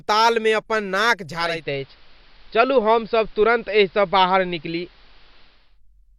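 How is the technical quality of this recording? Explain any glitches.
The recording has one real problem: a digital radio blending to analogue episode. From 1.34 s to 5.80 s the receiver drops its digital stream and cross-fades over about 0.4 s to the station's AM broadcast, then back. While it's on AM, a faint hiss sits roughly 35 dB under the speech, and the level shifts by about 1 dB.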